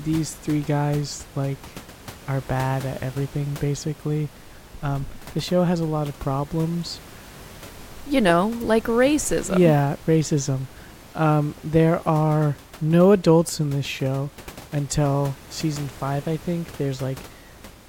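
Nothing stood out on listening to this speech recording; the only thing beneath it is the room's own background noise, sitting about 21 dB below the speech.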